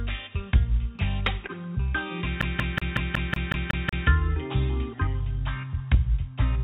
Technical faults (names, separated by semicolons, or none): short stall from a late packet; CD stuck on one turn